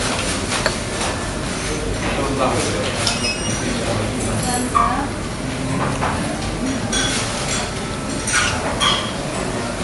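Throughout the clip the sound is plainly watery and swirly, with nothing above 11.3 kHz. This is likely MP3 compression at a low bitrate, which fits about 48 kbps: the encoder cuts the treble at a fixed point and drops weak frequency detail that flickers between frames.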